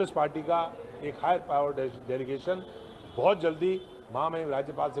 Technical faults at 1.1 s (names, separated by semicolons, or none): none